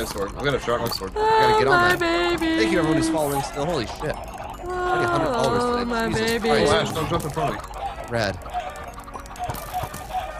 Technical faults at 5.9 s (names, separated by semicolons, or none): none